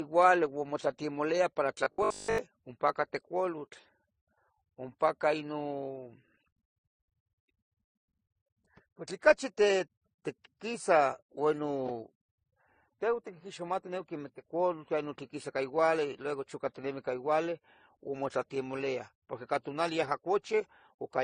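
The whole clip carries the mixed artefacts of transcoding between lossy codecs, likely an MP3 pass at around 34 kbit/s followed by AAC-LC at about 32 kbit/s. The lower cut-off of the chain stays, and the two codecs' artefacts pile up together.

From 1.84 to 2.38 s the speech collapses into a rigid metallic buzz at 50 Hz. That's robotic sound from repeated short buffers, likely a 20 ms chunk replayed while new audio lagged, so most of that stretch is repeats rather than real signal.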